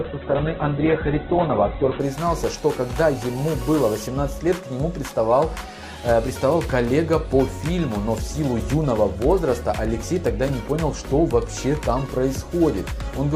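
For the first 2.0 s the audio is dull and smeared, with nothing above 4.1 kHz, then it brightens abruptly without a gap: an adaptive stream starting at a low bitrate, consistent with an 8 kbit/s Opus start stepping up to about 64 kbit/s.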